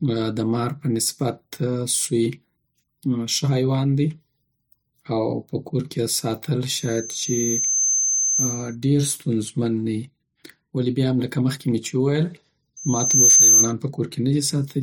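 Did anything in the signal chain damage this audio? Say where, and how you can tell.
Yes. A piercing 6.2 kHz squeal swells after "کورکی یی ساتل" (6.70 to 8.75 s, roughly 1.5 s build, near speech level) and returns after "مخکی می چی وویل" (12.76 to 13.73 s, half-second build, about 10 dB above speech). This is loudspeaker feedback squeal in the acoustic and analogue path. The microphone picks up its own loudspeaker, and at 6.2 kHz the loop gain exceeds one, so that tone regenerates.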